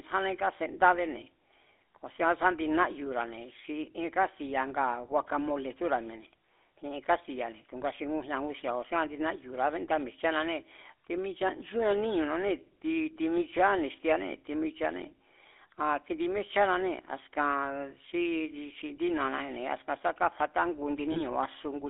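GSM full-rate codec damage runs through the whole recording. The codec models the vocal tract and excites it with sparse, regularly spaced pulses, so the speech takes on a plainly audible buzzy, gravelly roughness, squeezed into a 300 Hz to 3.5 kHz telephone band, which fits a 13 kbps full-rate stream.

Lost GSM frames follow at 21.12 to 21.21 s, right after "sá káfatá ngu". The decoder filled the gap by repeating the last good frame's settings, giving a brief rough, metallic ring where about 40 ms of audio went missing, consistent with two dropped frames.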